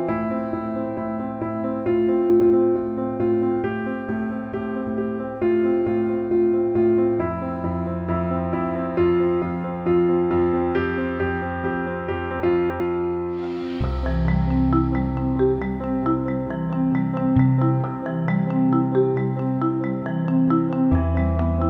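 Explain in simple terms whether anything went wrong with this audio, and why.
Two brief jumbled moments can be heard: one at 2.3 to 2.5 s, a longer one at 12.4 to 12.8 s. This is chunks out of order. The audio travels in small pieces of about 100 ms, and here one piece turned up late and played after pieces meant to follow it: one slot late the first time, three slots late the second. Nothing is missing, but the order is scrambled, with abrupt joins between the pieces.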